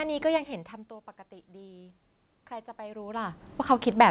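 A speech recording in which automatic gain rising sets in at 1.46 s and continues to the end at about 4.10 s. The input level drops by about 19 dB, and the automatic gain control responds by raising its gain gradually, so the voice and the room noise swell together over more than two seconds instead of settling at once. Throughout, nothing is audible above 4 kHz, which fits a narrowband telephone codec such as G.711.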